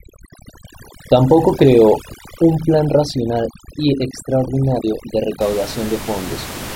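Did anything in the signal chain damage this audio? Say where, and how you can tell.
Yes. Overdone noise removal in the call processing stage, 0.0 to 5.41 s: room noise about 15 dB down is gated to twinkling specks, and the over-aggressive band suppression takes quiet parts of the speech with it.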